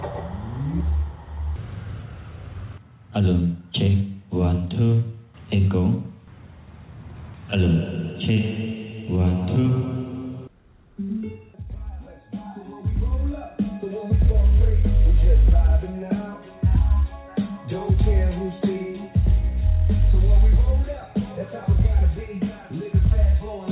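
At 1.56 to 1.58 s the sound lurches abruptly forward with no gap: a skip ahead, where around 400 ms of waiting audio was discarded and both sides spliced together. From 3.58 to 4.02 s it runs hurried at unchanged pitch, about 113% speed: a jitter buffer speed-up trimming short pitch-period slices to shed a few tens of milliseconds of excess delay. Throughout, the audio stops at 4 kHz, which fits a narrowband call codec.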